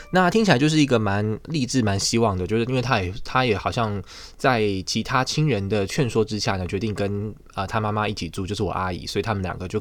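No technical faults can be heard anywhere in this recording.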